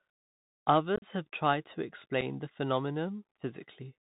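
Throughout, speech passes through a Bluetooth CVSD headset codec: one-bit delta modulation, consistent with a 64 kbps link, cuts everything above 4 kHz, leaving s sounds scratchy over granular hiss. From 0.96 to 1.04 s, and again at 2.21 s, unconcealed Bluetooth headset packet loss drops audio into abrupt gaps: about 52 ms of gaps, the longest 37.5 ms, chop the first stretch, then one brief 7.5 ms hole.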